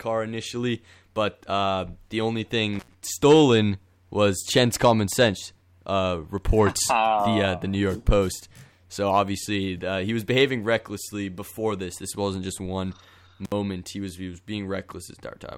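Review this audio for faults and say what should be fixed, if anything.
A loose cable or plug made an intermittent contact, briefly opening the line at 2.73 s after "but uh the only" and at 13.45 s after "wasn't just one". Speech dropped out for about 92 ms and 62 ms with crackle at each edge. Reseating or replacing the suspect connector and securing the cable run should prevent it.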